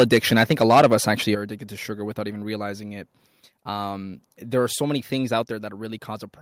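Microphone overload from 0 to 1.11 s: the input likely ran about 8 dB too hot, flattening roughly one sample in twenty and giving loud syllables a harsh crackle. Microphone volume stepped down at 1.35 s and 5.43 s: speech and background drop abruptly, by about 8 dB and then about 3 dB, likely call software cutting the input gain in single steps.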